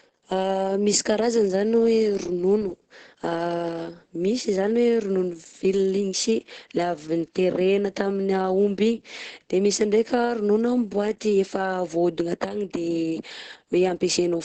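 From start to finish the speech carries Opus voice compression damage, and it's heavy. Nothing survives above about 9 kHz, and the coarse SILK excitation coding leaves it muffled, hoarse and a bit robotic, which fits a wideband stream squeezed to around 10 kbps.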